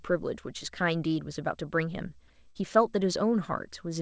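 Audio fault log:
2.50–2.61 s burst of packet loss: the receiver filled about 50 ms by repeating and fading the last sound, then resumed further on, skipping a short stretch. The waveform tapers, and the spectrogram shows a smeared, decaying patch.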